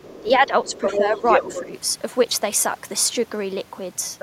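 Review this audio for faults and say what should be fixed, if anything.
Other side's voice leaking through: a second, fainter voice runs under the speech from 0.0 to 0.38 s at a low level. It returns much louder from 0.65 to 1.61 s, nearly as strong as the talker, and again briefly at 4.19 to 4.22 s. It is likely loudspeaker playback that the echo canceller left in the microphone signal. On a spectrogram, a second set of harmonic striations overlaps the talker's, with its own pitch contour. Better echo-path modelling or a headset would prevent this.

Speech suppressed in double talk: the talker's level dips at 0.21 to 0.75 s, 0.95 to 1.23 s and 1.48 to 1.73 s. The deepest dips are about 10 dB, and the middle one is shallower. Each dip happens while the other voice is present. The waveform envelope shows notches in those stretches. A double-talk detector that keeps near-end speech at full level while the far end is active would prevent this.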